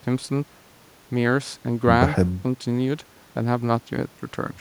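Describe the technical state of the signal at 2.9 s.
At 2.9 s the speech signal is intact, with no dropout, clipping, glitch or other audible fault at that point.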